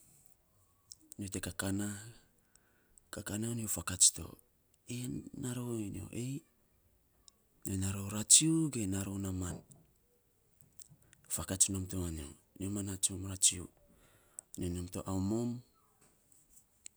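No technical faults can be heard anywhere in this speech recording.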